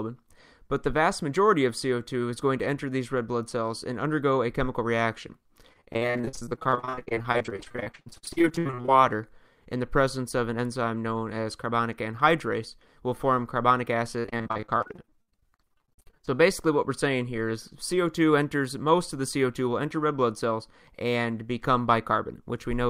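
The audio breaks up twice with repeated packet loss (robotic sound), from 5.73 to 8.90 s and from 14.20 to 16.34 s. In each stretch, dozens of short dropouts, the longest about 64 ms and 61 ms respectively, are patched by extending the preceding sound. Nearly half of each span, about 46% and 44%, is synthesized fill rather than original signal. This gives a choppy texture with pieces of the sound missing.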